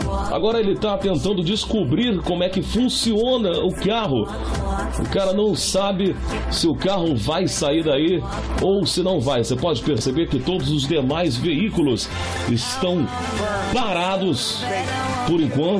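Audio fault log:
No faults found.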